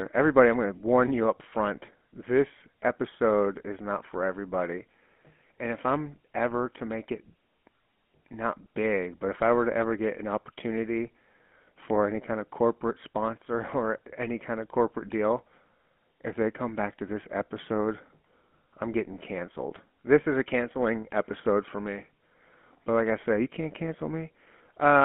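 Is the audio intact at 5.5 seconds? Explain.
No. From 5.48 to 5.50 s there are lost GSM frames: a single 20 ms frame dropped out and was filled in by reusing the codec settings of the last good frame. Because only one frame is missing, the level does not sink and there is no cut to silence. What you hear is a very short rough, metallic ring where the sound is held in place. On a spectrogram this shows as a 20 ms slice whose pattern copies the slice just before it, with formants frozen rather than moving. In the waveform it appears as a brief stretch that repeats the preceding texture without evolving.

The moment also carries the GSM full-rate codec heard across the whole clip. It models the vocal tract and drives it with a sparse, regularly spaced pulse excitation. This gives the speech a plainly audible buzzy, gravelly roughness, which fits 13 kbps full-rate GSM. On a spectrogram the energy sits inside a telephone band of about 200 Hz to 3.4 kHz, with nothing at all above 4 kHz. 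In the waveform the signal looks coarse and pulse-driven instead of smooth.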